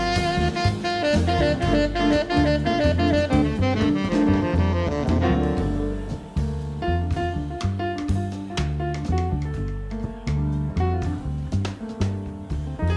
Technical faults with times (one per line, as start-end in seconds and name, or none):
none